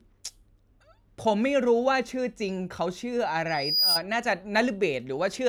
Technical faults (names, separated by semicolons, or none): loudspeaker feedback squeal